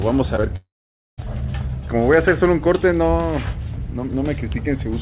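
A brief smear at 0.36 to 0.40 s, then another between 0.42 and 0.55 s, are short concealed packet loss. About 20 ms of audio arrived too late each time, and the receiver filled the gap by extending the preceding sound before blending back, adding about 15 ms of extra length the second time.

From 0.56 to 1.2 s the sound trails off into a fading buzz and then about half a second of silence, before resuming with a piece simply gone. This is a long network dropout, likely a stretch where no packets got through at all.

Throughout, nothing is heard above 4 kHz, which fits a narrowband G.711 call link.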